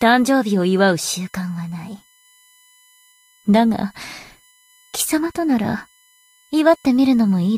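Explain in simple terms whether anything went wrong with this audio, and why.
There's a faint USB whine running throughout, a steady 1 kHz tone with harmonics strongest at 18 kHz, from USB power or ground noise leaking into the audio.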